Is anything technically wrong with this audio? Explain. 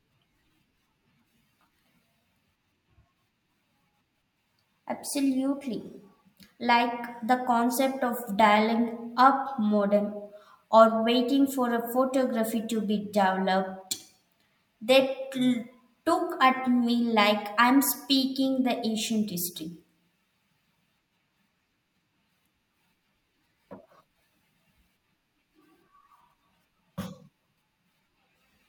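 No, nothing is technically wrong with this audio. The speech comes through with no fault to point to anywhere in the clip.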